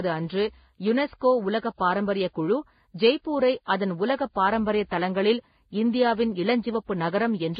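From start to end the speech sounds dull and muffled, with nothing above 4.9 kHz and a mix of swirling, smeared artefacts layered together. This is likely transcoding between lossy codecs: the sound points to a low-rate first encode followed by two further lossy stages ending in WMA, each adding its own damage.

From 0.88 to 0.90 s, just before "உலக பாரம்பரியக் குழு ஜெய்ப்பூரை", a single loud pop jumps about 5 dB above the speech, which carries on underneath. The likely cause is a sudden voltage step, such as from a plug, switch or static discharge.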